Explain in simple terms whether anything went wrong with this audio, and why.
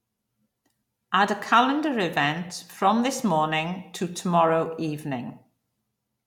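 Nothing went wrong here: the speech runs through without any audible technical fault at any point.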